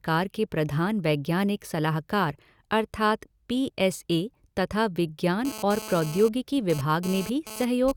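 A nearby 2G handset, exchanging data rather than holding a call, is radiating bursts of radio energy that the audio circuitry rectifies into the signal path, producing GSM phone buzz from 5.45 s to 7.92 s. The pulses arrive at about 217 Hz, so the speech picks up a hard, raspy buzz rich in harmonics, sitting about 13 dB below the speech and coming and going in stuttering spurts, unrelated to anything being said.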